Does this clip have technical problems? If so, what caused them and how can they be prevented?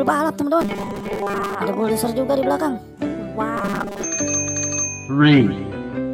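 Yes: robotic sound from repeated short buffers at 0.61 to 1.55 s and 3.57 to 4.04 s. A rigid 200 Hz buzz covers most of the sound, which fits a 5 ms chunk being looped, likely because fresh audio arrived too late. On a spectrogram this shows as flat, evenly spaced harmonic lines, and on a waveform as identical cycles repeating every 5 ms. Prevent it by enlarging the audio buffer or giving audio processing higher priority.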